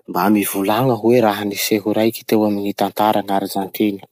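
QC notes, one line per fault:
Throughout, low-delay AAC compression: the speech sounds plainly rough and grainy, with a hazy noise filling the gaps between the voice's harmonics. The likely cause is AAC-ELD, the low-delay AAC used in video calls, at a rate that fits roughly 32 kbps. Its very short frames, around 10 ms, cannot resolve pitch harmonics finely and spend more bits per second, so at this rate quantisation noise spreads across the spectrum and smears the harmonic detail.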